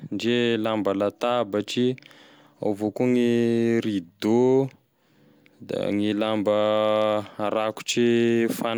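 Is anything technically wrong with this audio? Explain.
No, nothing in this speech recording points to a technical fault.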